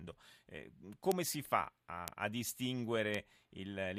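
At 1.12 s and 2.08 s a bit error spike lands on a single sample, peaking near about -11 dBFS. A flipped bit makes the value leap by a power of two and snap back, giving a sharp broadband tick. A quieter three-sample spike follows at 3.14 s, around -23 dBFS.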